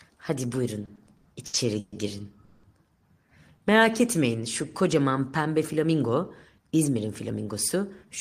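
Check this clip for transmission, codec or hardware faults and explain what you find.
Three network-related faults can be heard, all pointing to late packet delivery.

Repeated stalls (stutter), 0.85 to 1.94 s: packets kept arriving behind the playback rate, so the jitter buffer emptied six times. Each time the receiver stretched the last sound to cover the wait, filling about 330 ms in total, with the longest gap 130 ms. Nothing is lost, but about 30% of this stretch is fill, so the audio catches and drags in a halting rhythm.

Call audio freeze, 2.44 to 2.65 s: the sound holds on one continued, fading tone for 190 ms and then resumes exactly where it left off, with nothing skipped and no drop to silence. The likely cause is a short hold-up of packets that drained the jitter buffer, leaving the receiver to extend the last sound until delivery restarted. This pushes the delay up by 190 ms.

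Jitter buffer speed-up, 6.58 to 7.76 s: having built up surplus delay, the receiver trimmed it back by removing many tiny pitch-period slices in succession, taking out about a tenth of a second overall. Playback runs at 108% speed while the pitch stays the same, so this passage sounds slightly rushed and compressed in time.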